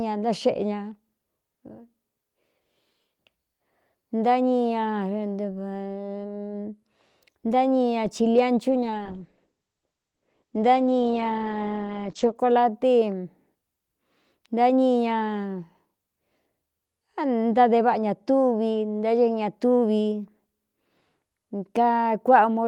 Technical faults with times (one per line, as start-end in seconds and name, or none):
8.73-12.41 call bitrate drop